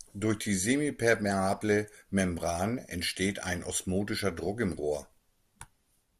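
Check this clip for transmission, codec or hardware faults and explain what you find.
There is one fault, DAB burbling, at 4.47 s. Weak reception let bit errors slip past error correction into the MP2 data, an error rate of around a tenth of a percent. Corrupted samples put short blips of noise in single sub-bands and corrupted scale factors make sub-bands jump in level for a moment, fitting a few frames, and this lays short burbling noise over the speech.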